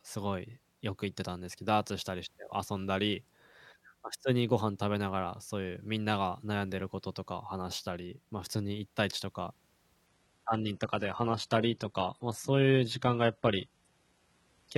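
At 10.07 s the speech suddenly drops in quality and stays that way to the end, at 14.78 s. This is an adaptive stream at a lower bitrate. The stream switched down mid-play, with no gap, when the connection likely slowed. Before the switch the sound fits AAC at around 96 kbit/s. Afterwards it points to HE-AAC near 16 kbit/s. Nothing remains above 11.8 kHz, and codec artefacts rise.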